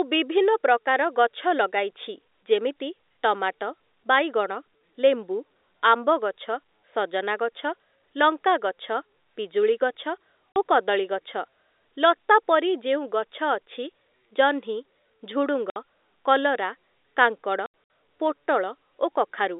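At 10.52 s, 15.70 s and 17.66 s the speech drops out through packet loss filled with silence: gaps of 40 ms and 60 ms, then 140 ms scattered over 240 ms, fitting 20 ms packets. Each hole shows as flat, silent waveform stretches and hard-edged vertical blank bands on a spectrogram.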